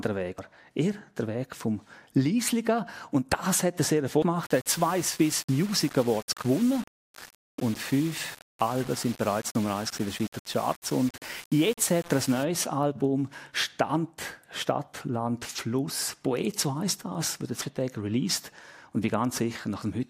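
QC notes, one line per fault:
0.38 s, 4.22 s and 17.62 s: damaged data in a compressed stream. Each moment is a brief chirp or blip. The decoder hits frames whose bytes are corrupted, cannot read them, loses its place in the stream and skips ahead to the next valid frame header. Each event is a single instant, a short burst of garbage followed by the sound resuming, possibly a little further along than it should.
4.43 to 12.43 s: low bit depth without dither. For these 8 seconds the audio turns grainy. The distortion follows the sound, rough on quieter passages, and the softest moments collapse toward silence or sputter between steps. The error sits roughly 20 dB below the signal, which fits a signal likely rounded to about 5 bits with no dither, so the rounding error stays tied to the waveform.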